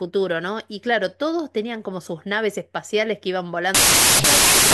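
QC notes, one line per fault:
3.75–4.73 s, wrong sample width: harsh loud noise buries the speech, which plays 1.5 times fast and high, consistent with 16-bit data read as packed 24-bit.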